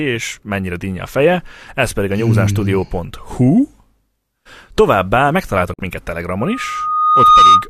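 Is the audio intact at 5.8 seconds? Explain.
Yes, but only just. A digital broadcast dropout runs from 5.74 to 5.79 s: the receiver lost a couple of frames, quickly faded to silence, and muted for about 50 ms. By 5.8 s good frames are back, though the sound in that hole is gone.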